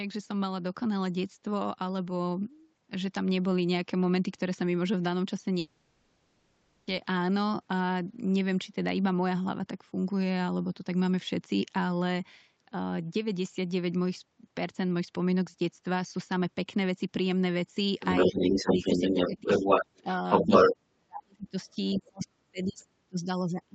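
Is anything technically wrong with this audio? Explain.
Yes, there are three kinds of fault.

From 5.59 to 6.89 s there is a long network dropout. For about 1.3 s no new audio is heard. The last sound is stretched into a fading buzz that fills the whole gap. No silence is left, but that stretch of speech never returns. The speech picks up again at 6.89 s with the lost part skipped. The likely cause is packets that stopped arriving for that time, with the receiver's concealment filling the hole.

The other side's voice leaks through twice. From 18.0 to 20.71 s a second voice is clearly audible. It sits roughly 5 dB above the main speech, so it dominates that stretch. From 21.91 to 22.25 s it returns briefly and much quieter, roughly 15 dB below the speech. This is likely an echo canceller that failed to remove a loudspeaker's playback from the microphone.

Speech is suppressed in double talk in four places. 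From 18.37 to 19.63 s the main speech dips by about 10 dB, for roughly half a second in total. A brief dip of similar depth falls at 20.02 to 20.06 s. From 20.42 to 21.56 s it drops by as much as 40 dB, nearly vanishing for about a second. From 21.94 s to the end at 23.74 s it is again cut deeply, by up to about 40 dB. These drops overlap the leaking voice. The likely cause is the echo canceller turning everything down when both sides spoke at once. All of this sits in audio limited to 8 kHz by the Opus call path.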